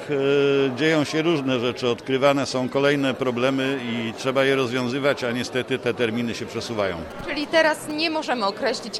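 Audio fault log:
7.11 to 7.92 s, GSM signalling bursts: a galloping dit-dit-dit of short buzzes repeating at 217 Hz, about 15 dB below the programme. A nearby 2G handset is signalling with brief radio bursts, and the audio circuitry rectifies their envelope into audible clicks.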